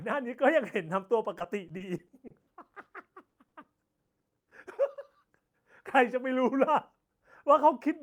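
From 1.38 to 2.87 s, repeated packet loss (robotic sound) sets in. The stream drops or delays data ten times in quick succession, with holes up to 60 ms long and 200 ms concealed in all. Each gap is bridged by stretching the preceding sound before the next one arrives, so this stretch turns choppy and mechanical, with fragments of the speech missing.

Short concealed packet loss follows at 3.29 to 3.34 s and 3.48 to 3.53 s, each covering 40 ms, and at 3.63 to 3.65 s, covering 10 ms. In each, a small piece of the signal arrives too late, and the decoder extends the last pitch or noise before blending back in. Each one comes across as a brief smear or wobble, and a short consonant can drop out.

From 4.06 to 4.52 s, repeated packet loss returns as four closely spaced gaps, the longest 60 ms, with 100 ms filled in. That is about a fifth of this span, so the robotic, broken texture is denser here.

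A final 10 ms instance of short concealed packet loss at 4.95 s leaves a brief smear or wobble.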